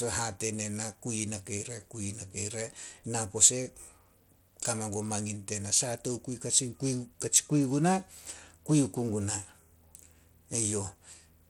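Speech carries plainly audible Bluetooth SBC compression throughout, likely from a starved bit pool fitting roughly 96 kbps. Coarse sub-band quantisation adds even grit and flickering treble, with nothing above 19.4 kHz, unlike the swirly artefacts of hearing-model codecs.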